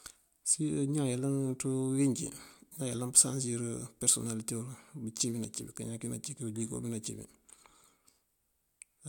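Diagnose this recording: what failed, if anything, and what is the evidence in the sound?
Nothing failed; no defect is audible anywhere in this speech.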